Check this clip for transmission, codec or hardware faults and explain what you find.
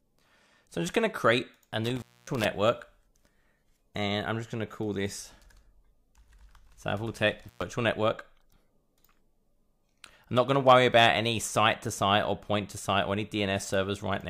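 The clip has one hardware fault, an intermittent contact, heard twice: from 1.84 to 2.45 s, with the line open for about 0.25 s, and from 7.47 to 7.62 s, open for about 0.11 s. A loose plug or cable briefly loses connection, so the audio cuts out and breaks up, with crackle as the contact scrapes open and shut. That ragged, crackling edge sets it apart from a network packet loss, whose gaps start and end cleanly or are smoothed over.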